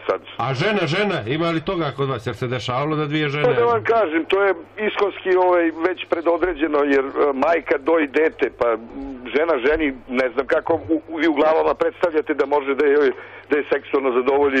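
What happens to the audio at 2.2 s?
Nothing goes wrong at 2.2 s; the audio plays through that moment intact, with no dropout, click or distortion.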